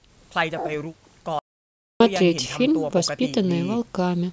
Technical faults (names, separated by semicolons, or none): audio dropout to silence